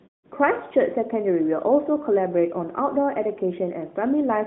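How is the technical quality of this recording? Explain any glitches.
No glitches: the recording shows no dropouts, clicks, distortion or timing faults.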